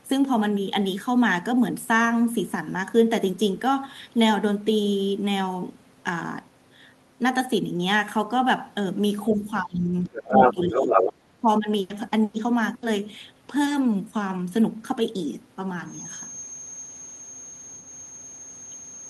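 From 9.29 to 11.16 s the speech dips by as much as about 15 dB in broken patches, and again from 11.41 to 11.68 s by about 10 dB. This is likely speech suppressed in double talk, with the echo canceller turning down the talker while both sides spoke.

From 10.05 to 11.12 s a second voice comes through, at about 5 dB above the talker's own level. The likely cause is the other side's voice leaking through from an uncancelled loudspeaker.

From 15.82 s to the end a thin, steady 6.4 kHz tone sits about 15 dB under the speech, swelling and fading slowly. This feedback whistle is likely a loudspeaker-to-microphone loop held just short of runaway.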